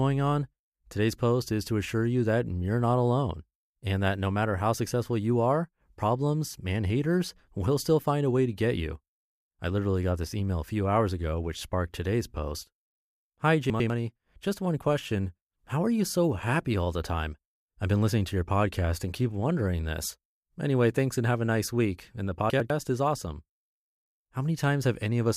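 At 13.7 s the speech briefly scrambles. Between 13.7 and 13.9 s two 100 ms chunks play in swapped order, with one chunk arriving a single slot late, so a short stretch of sound lands after the stretch that should follow it. The same chunks out of order fault returns from 22.5 to 22.7 s, just before "is awesome". Each time nothing is missing, but the jumbled order garbles the syllables, with three hard joins. On a waveform each joint shows a sudden step. The spectrogram shows thin vertical broadband lines at the joins and harmonic tracks that break and jump.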